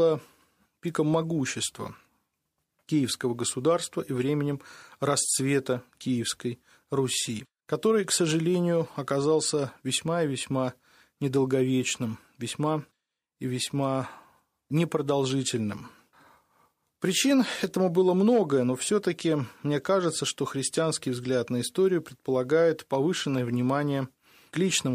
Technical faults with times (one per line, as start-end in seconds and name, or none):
none